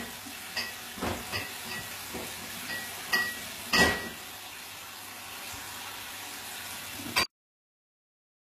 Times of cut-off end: 7.23-8.60

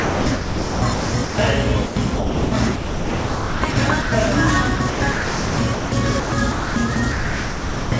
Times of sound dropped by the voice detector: 4.02-4.12

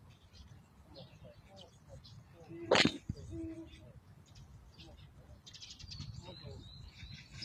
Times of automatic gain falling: none

